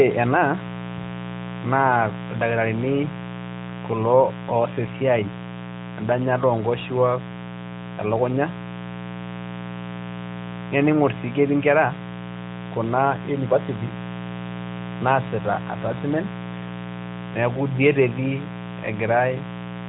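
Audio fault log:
Throughout: mains buzz, a steady raspy buzz under the speech at about 10 dB below it. Sharp switching spikes on the 60 Hz supply, two per cycle, produce a dense ladder of 60 Hz harmonics climbing into the kilohertz range, giving it that gritty edge. The speech also sits inside a narrowband mobile codec path with nothing above 3.8 kHz.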